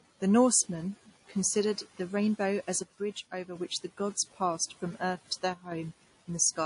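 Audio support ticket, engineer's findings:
Stacked codec smear across the whole 6.7 s speech clip, likely transcoding between lossy codecs. Nothing above 10.6 kHz, plus two flavours of artefact layered together, which fits a low-rate MP3 (around 38 kbit/s) re-encoded to WMA 1 at roughly 64 kbit/s.

One channel drops out, 2.82–3.55 s. Shared content falls about 6 dB abruptly, channel-only material gone. Likely a lost stereo leg before the mono sum.

Same drop again, 5.54–5.72 s, short burst. About 6 dB step down on the common content, then recovers. Likely same mechanism, one side missing from the sum.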